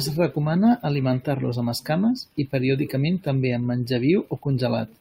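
No technical faults are audible anywhere in the speech recording.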